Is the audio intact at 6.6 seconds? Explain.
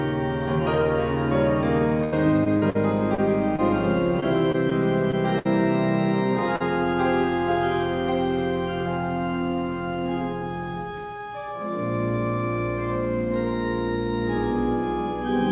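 No. Between 6.56 and 6.62 s, about 40 ms of the call's packets failed to reach the decoder in time, a short concealed packet loss. The receiver covered the gap with roughly 42 ms of synthesized sound, extending the preceding signal and then blending back into the real audio. This comes through as a brief smear or wobble, and any short sound in that gap may be lost. The narrowband call path, which fits G.711 A-law at 64 kbps, carries nothing above 4 kHz.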